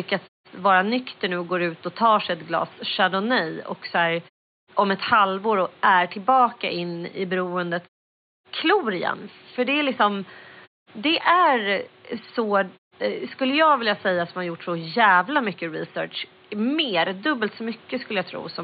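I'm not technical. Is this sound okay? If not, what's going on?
Yes, nothing is wrong with this speech recording. You can hear faint background noise of the room well beneath the talking, and in the pauses that background fades to silence before coming back in time for the next sound, which is normal behaviour.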